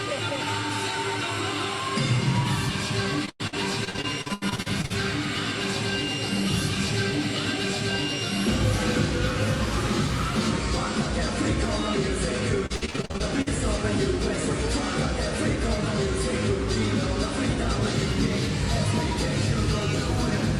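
From 3.25 to 4.92 s, and again from 12.66 to 13.48 s, repeated packet loss leaves short holes up to about 99 ms, patched by extending the preceding sound. Over a third of each stretch is filled in, giving a choppy, robotic texture rather than clean silent dropouts.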